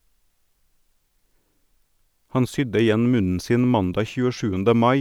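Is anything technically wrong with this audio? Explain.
No technical faults are audible.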